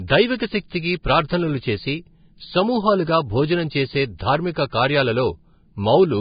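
A speech recording that sounds hissy and grainy throughout, with nothing above 4.9 kHz and roughened tones. This is heavy damage from Vorbis compression, likely at a bitrate around 16 kbps, where treble detail is quantised into noise. Pre-echo puts a brief hiss before sharp attacks at 1.28 s, at 4.18 s and 4.53–4.56 s just after "భోజనం చేసే", and at 4.70–4.72 s, spreading about 16 to 27 ms. The codec smears quantisation noise across the whole transform block, so it fills the quiet moment before each onset and softens it.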